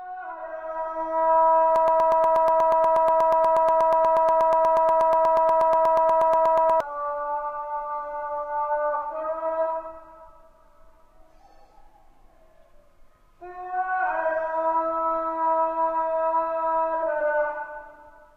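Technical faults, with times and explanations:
1.76–6.80 s, broken-record loop: a 0.12 s fragment repeats exactly, back to back, 42 times, so the sound stutters in a rigid mechanical rhythm of about eight cycles a second. The likely cause is a stalled player, encoder or stream that kept resending its last held fragment, so the audio due in those five seconds is gone. On a waveform and spectrogram, an identical block tiles across the span at a fixed 0.12 s period.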